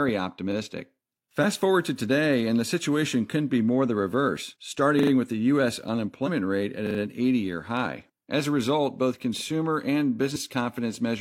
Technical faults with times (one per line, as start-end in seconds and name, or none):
4.99-5.11 repeated buffer
6.23-6.28 damaged data in a compressed stream
6.87-6.99 repeated buffer
10.31-10.37 damaged data in a compressed stream